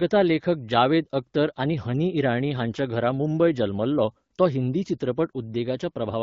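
No faults detected in this speech; the band-limited, lightly coded character fits AMR wideband (HD Voice) at around 12.65 kbit/s working as designed.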